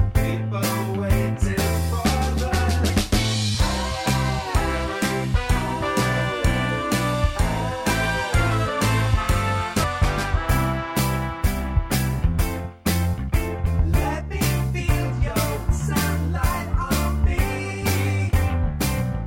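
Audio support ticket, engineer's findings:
Damaged data in a compressed stream at 2.88 s, 9.82–9.84 s, 13.66–13.68 s and 15.70–15.72 s: short chirps or blips, each 20 ms or less. Corrupt bytes in the coded frames make the decoder misread them, lose sync and resync at the next frame header.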